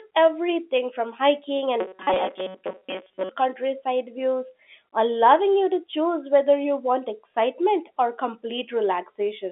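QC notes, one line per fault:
1.80–3.30 s, robotic sound from repeated short buffers: after "everything from hiking" and until "countryside views allowing you", the speech becomes a rigid metallic buzz fixed at 188 Hz that only loosely follows the syllables. New audio is arriving too slowly, so each short buffer of about 5.3 ms is looped, and most of the real sound in that stretch is skipped. The loop length sets the 188 Hz tone, which fits a buffer of that size and is likely caused by a stalled audio feed. The pitch stays constant across the whole span instead of tracking the talker, which tells it apart from a concealed packet loss.
2.14–2.16 s, packet loss with pitch repetition: about 20 ms of audio is missing, which points to a single lost packet. The receiver fills the gap by repeating the last pitch period, so there is a brief held, buzzy moment rather than silence, then a short cross-fade back to the incoming signal. 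The repeat copies one cycle of the talker's own pitch for a single short gap inside the longer robotic passage, so it does not last long enough to fade to silence. Within the telephone band of 250 Hz to 3.5 kHz this shows up as a slightly held, buzzy note.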